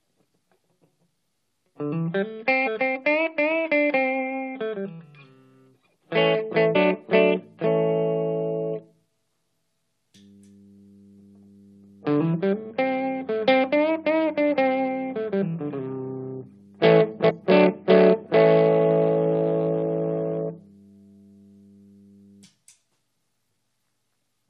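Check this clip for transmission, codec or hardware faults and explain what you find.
There's one kind of fault here, damaged data in a compressed stream, turning up three times: 2.66 to 2.68 s, at 6.75 s, and 17.29 to 17.31 s. Each is a tiny blip of roughly 20 ms. Some bytes in the encoded stream got corrupted, so the decoder couldn't make sense of those frames. It lost sync and hunted for the next valid frame header. You hear that as a short chirp, squawk, click or hole in the sound.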